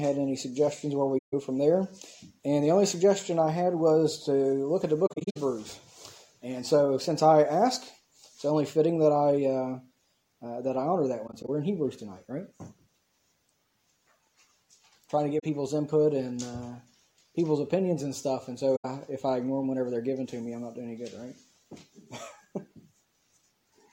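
AAC frame loss with muting cuts soft-edged holes at 1.18–1.34 s (about 150 ms), 5.06–5.37 s (about 210 ms lost in pieces, the longest run around 70 ms), 11.27–11.49 s (about 85 ms in brief dropouts), 15.39–15.44 s (about 43 ms) and 18.76–18.85 s (about 85 ms). The decoder zeroed the missing frames' spectrum, and the overlapping windows fade the sound out and back in.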